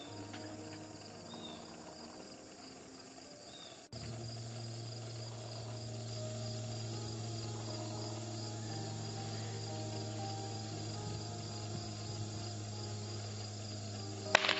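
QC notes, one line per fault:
No faults found.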